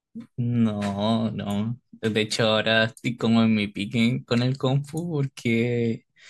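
No technical faults can be heard anywhere in the speech.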